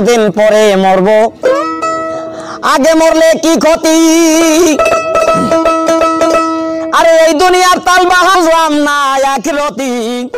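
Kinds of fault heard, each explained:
Damaged data in a compressed stream: corrupt frames throw the decoder out of sync, giving three brief glitches.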